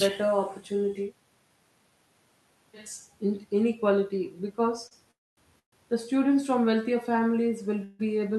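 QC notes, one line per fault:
4.87–4.93 s, short stall from a late packet: the sound is held about 37 ms too long with a faint buzzy smear, then picks up exactly where it left off. A packet arrived late, the jitter buffer ran dry, and the receiver stretched the last sound to cover the wait.
5.11–5.39 s, 5.59–5.74 s and 7.84–8.01 s, call audio freeze: the audio halts and a fading buzz fills the gap. The first gap is 259 ms, most of it silent. The second is 132 ms with a silent tail. The third is 152 ms of held buzz with no silence. Each time the sound resumes from the same point, so nothing is lost and each pause adds to the delay. This likely comes from packets held up in transit, which emptied the jitter buffer.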